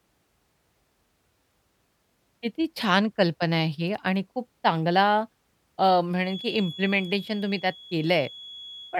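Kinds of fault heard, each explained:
Feedback whistle: from about 6.18 s until the clip ends at 8.99 s, a thin, steady whistle near 3.4 kHz sits behind the speech, swelling and fading slowly in level and staying well under it, roughly 20 dB down. The likely cause is a loudspeaker-to-microphone loop held just at the edge of feedback, so that single frequency keeps recirculating and sustaining itself without growing into a full howl.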